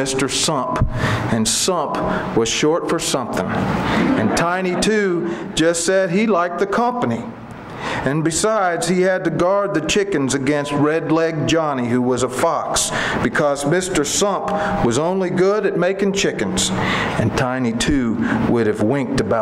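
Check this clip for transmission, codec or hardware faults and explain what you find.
I found no transmission, codec or hardware faults in this clip.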